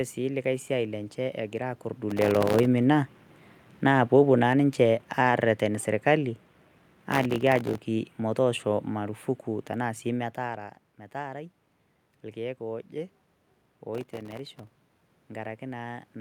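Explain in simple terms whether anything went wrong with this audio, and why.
Three bursts of processor overload crackle break up the speech, at 2.10 to 2.66 s, 7.10 to 7.78 s and 13.95 to 15.24 s. The computer could not keep up. It kept missing its deadlines for very small chunks of audio, which fits buffers of roughly 1.5 ms. Each miss left a tiny hole of silence, and the holes together sound gritty and torn.

Between 3.76 and 6.45 s, automatic gain falling makes the speech slowly sink. The system judged the input too loud, or its background noise too strong, and turned its own volume down step by step. The background noise in the room drops along with the voice.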